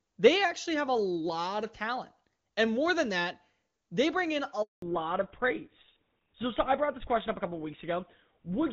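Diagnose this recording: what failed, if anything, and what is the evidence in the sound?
Network stage. A handover gap at 4.62 s, right after "they bring in a": the sound drops out and stays silent for 200 ms, until 4.82 s. The call was moved between networks, no frames arrived during the switch, and that audio is lost.

Codec stage. From 4.82 s to the end there is a fallback to narrowband: nothing above 4 kHz remains, and the sound turns duller and rougher. Before the gap the HD Voice path carried clean wideband detail, fitting AMR-WB at its top rate. Afterwards the character fits GSM full rate.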